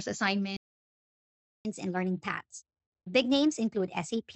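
At 0.57 s the speech cuts out mid-flow and stays silent until 1.65 s, a gap of about 1.08 s. That's a playback stall: the player most likely ran dry of buffered data or had its thread blocked, so nothing reached the output.

From 1.65 s to the end you get catch-up at higher speed. The player is chewing through its backlog by resampling at 1.1 times normal speed, so the speech runs quick and sits roughly one and a half semitones sharp, a slightly chipmunky lift.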